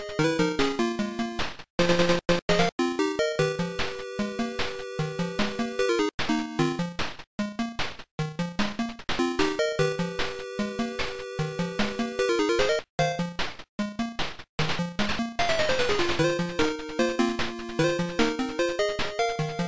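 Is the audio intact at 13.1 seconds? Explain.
Yes, the audio is intact at 13.1 seconds, with no fault audible at that moment.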